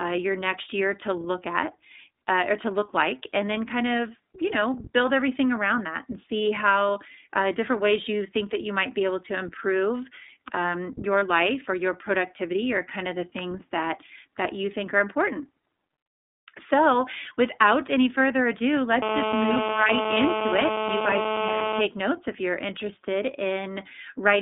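Speech recorded through the iLBC codec is confined to roughly 250 Hz to 3.7 kHz, so a spectrogram shows nothing above that line, and the rough, synthetic coding damage is plainly audible. The sound points to the 13.33 kbps mode with 30 ms frames. One lost iLBC frame, from 11.19 to 11.23 s between "able to improve um" and "life or your productivity", is filled with a repeated pitch cycle mixed with noise. It sounds like a brief buzzy held vowel and looks like a short stretch of regularly repeating waveform. From 19.02 to 21.82 s, between "without any further ado" and "notes if you're interested", GSM phone buzz from a nearby 2G handset on a call adds a hard, raspy 217 Hz tone at about 2 dB below the speech. It appears as a steady comb of harmonic lines on the spectrogram.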